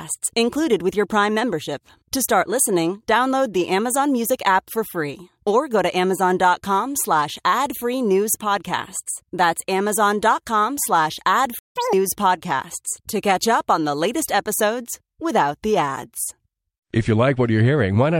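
At 11.59 s the speech cuts to silence for 170 ms, until 11.76 s. This is a playback stall. The player was likely starved of data or had its thread blocked, so nothing reached the output. It differs from a dropout, where a chunk of audio is lost and the speech jumps ahead. Here the speech picks up again once the player recovers.

From 11.76 s to 11.93 s comes catch-up at higher speed. The player works through the backlog from the stall by resampling at double speed. Pitch rises with it, by roughly ten semitones, close to an octave, and the speech turns briefly chipmunk-like before returning to normal just before "podcasts to catch up". A steady pitch-shift fault would stay shifted. This one lasts only about as long as the gap it makes up.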